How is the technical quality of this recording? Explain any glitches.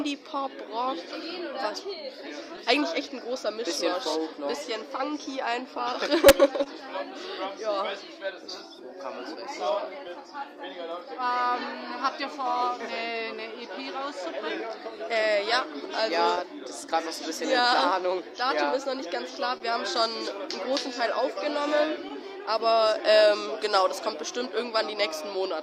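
The recording has timing faults that run through the whole clip, plus two stretches of small dropouts.

Clock drift between sender and receiver is present from start to finish. The sending clock runs about 1.5% slow. The receiver's buffer keeps draining, so it must stretch the audio to keep up. This leaves a faint, persistent unevenness in pacing.

Repeated timing corrections follow from that drift, from 0.04 s to 25.01 s. The receiver repeatedly inserts short repeated pieces, playing at about 99% speed. Together they add roughly 200 ms. Each edit is tiny. At most they come across as slight hiccups and a subtly wobbly tempo.

Scattered short gaps appear from 2.57 s to 6.68 s and again from 16.35 s to 24.42 s. The first stretch has a few small holes, none longer than about 20 ms. The second has several, up to about 30 ms. Each was patched by extending the preceding sound. They register as brief ticks or smears, more frequent in the later stretch.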